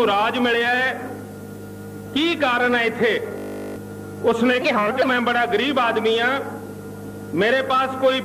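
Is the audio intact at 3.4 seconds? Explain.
No. From 3.38 to 3.76 s a system hang loop occurs: the machine froze while the sound hardware kept replaying the same 20 ms buffer. That slice repeats about nineteen times, producing a steady 50 Hz buzz in place of nearly half a second of real audio.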